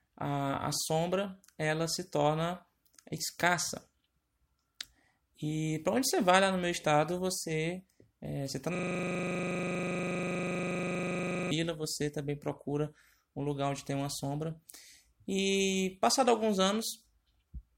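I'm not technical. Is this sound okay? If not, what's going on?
No. From 8.75 to 11.51 s, right after "você é você está", there is a system hang loop. The computer froze and the sound hardware kept replaying the same 40 ms scrap dozens of times, producing a steady buzz at 25 repeats per second rather than silence or a skip. Speech resumes with "você também procura um".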